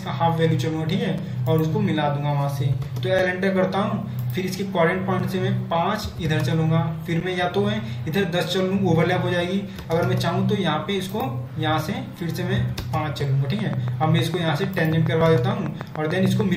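Near the end, from 13.59 s to 16.42 s, there's a train of clicks: around twenty evenly spaced pops at 6.76 per second, sticking out about 10 dB above the sound. Likely nearby electrical interference or a faulty connection or power supply injecting a repeating pulse.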